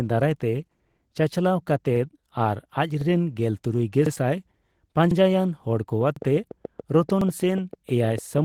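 Throughout the speech runs through Opus voice compression in hybrid mode: linear-prediction coding below 8 kHz with a coarse transform layer above, still reaching to about 20 kHz. The damage is plainly audible as a hoarse, slightly robotic edge, which fits a low bitrate around 16 kbps. A spectrogram shows smeared harmonics and patchy, grainy energy in the upper band.

Overlapping chunks appear at 0.91, 1.96, 3.01, 4.06, 5.11, 6.16, 7.21 and 8.26 s. The audio was handled in 1 s pieces, each starting 50 ms before the previous one ended, so that 50 ms plays twice. Each join is a brief stutter or click, and the waveform shows a duplicated segment with a discontinuity at each seam.

From 6.01 s to the end, a train of clicks ticks over the sound at a regular rate of about 6.8 per second, with peaks about 5 dB above the speech. The likely cause is electrical interference or a faulty connection. 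On a spectrogram these are evenly spaced thin vertical lines across all frequencies, and in the waveform they are sharp, similarly shaped spikes.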